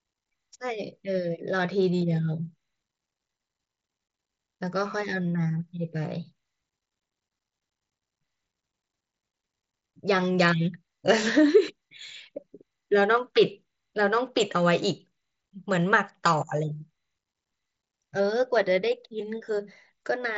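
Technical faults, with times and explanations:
No technical faults can be heard in this speech. It has come over a Bluetooth mSBC headset link, so nothing reaches above about 7.7 kHz and there is a light graininess on the louder sounds, as expected from that wideband codec.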